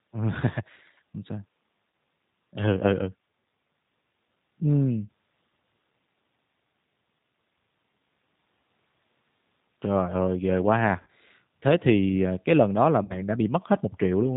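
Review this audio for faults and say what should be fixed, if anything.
The G.729 codec is audible across the whole recording. At 8 kbit/s it rebuilds speech from a vocal-tract filter, a pitch predictor and sparse pulses, and cuts everything above 4 kHz, so the speech sounds dull, rough and slightly synthetic. Preventing this means using a wideband codec such as G.722 or Opus.

VoIP packet loss concealed by the speech codec occurs at 1.90–1.93 s, 11.02–11.07 s and 13.04–13.23 s. The first two gaps each cover about 30 ms of lost audio, and the third covers about 60 ms. In each, the decoder extends its last pitch and filter state into a sound that fades, and the sound stays weak after packets resume. Better network QoS, forward error correction or a deeper jitter buffer would prevent the loss.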